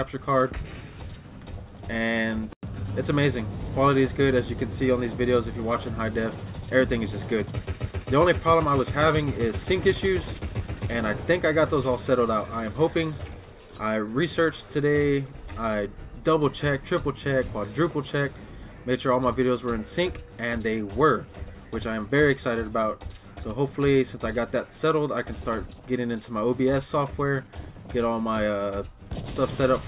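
No technical faults can be heard anywhere in this recording.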